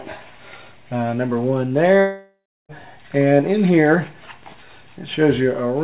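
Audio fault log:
2.00–2.72 s, long network dropout: the sound turns into a buzzy continuation of what came just before, fades, and ends in roughly a third of a second of silence. Then the audio resumes with about 0.69 s missing. This is likely a lost stretch of packets that the receiver papered over. A short concealment glitch would last only tens of milliseconds, and a simple mute would have no fading buzz. Throughout, nothing above 4 kHz is heard, which fits a narrowband telephone codec.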